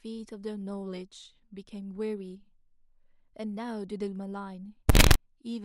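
Samples built from the wrong bytes hit this speech clip from 4.89 to 5.15 s: misassembled sample bytes turn fast low bits into dominant values, producing a burst of loud, harsh broadband noise.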